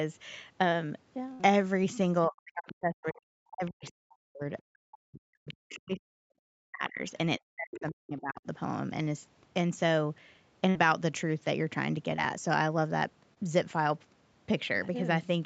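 At 1.33 to 1.41 s, and again at 10.69 to 10.77 s, there is a burst of packet loss. The receiver extends the last sound for roughly 50 to 60 ms as a fading buzz or hiss, then skips ahead over about 60 ms that never arrived. The audible jump in the timeline sets this apart from a simple dropout.

From 2.27 to 4.44 s, 4.62 to 6.27 s, 6.62 to 7.02 s and 7.39 to 8.46 s, the speech is suppressed in double talk. The talker's level falls, at its deepest by something like 40 dB, likely because the echo canceller turned everything down while the far side was speaking.

Inside those stretches, the other side's voice leaks through at 2.67 to 2.73 s, 5.49 to 5.54 s, 5.70 to 5.76 s and 7.73 to 7.80 s. These are faint scraps sitting well below the talker, likely loudspeaker echo that was not fully cancelled.

Short concealed packet loss appears at 12.17 to 12.20 s and 13.34 to 13.38 s. About 20 ms of audio failed to arrive each time and was bridged by a brief synthetic continuation, heard as a small smear. 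These gaps are much shorter than the longer bursts, which fade out before jumping ahead.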